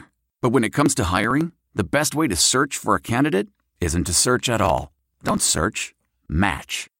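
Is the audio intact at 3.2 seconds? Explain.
Yes, the speech at 3.2 seconds has no audible technical fault: no dropout, click, distortion or glitch interrupts the sound there.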